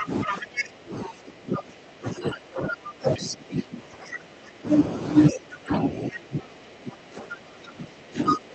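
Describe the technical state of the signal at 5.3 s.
Right at 5.3 s the other side's voice leaks through, a brief scrap from 5.29 to 5.36 s sitting about 15 dB below the talker. It's faint and clipped short, likely because the echo canceller missed a bit of loudspeaker playback picked up by the mic.

From 5.3 s to the end, the talker's speech is suppressed in double talk. Both sides were talking at once, and the canceller likely couldn't separate them, so it pulled the talker down too. The level dips unevenly, bottoming out about 20 dB lower.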